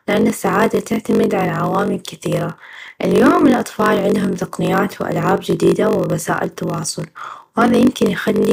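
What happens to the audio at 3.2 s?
At 3.2 s, as throughout the speech, a block size mismatch (padded) is audible: each 1024-sample read block arrives only partly filled and ends in zeros. The repeated gaps produce a steady 46.9 Hz buzz and slow delivery to 0.938 times normal speed, yet timbre stays natural, unlike a sample-rate slowdown.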